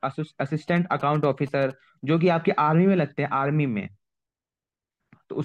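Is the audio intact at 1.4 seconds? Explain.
No. From 0.68 to 1.72 s the speech carries GSM signalling bursts: a nearby 2G phone's radio pulses, rectified by the audio circuit, make a galloping dit-dit-dit of short 217 Hz buzzes well below the speech. Unlike steady mains hum, they come in short groups.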